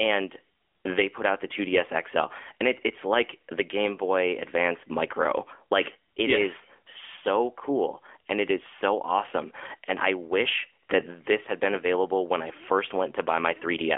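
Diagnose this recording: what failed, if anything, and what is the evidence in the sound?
The speech went through an AMR narrowband mobile codec for the whole clip. Nothing survives above 3.6 kHz, the low end thins below 250 Hz, and the pulse-driven vocal-tract model adds a plainly audible buzzy, synthetic edge, which fits a mid-rate mode near 10 kbps.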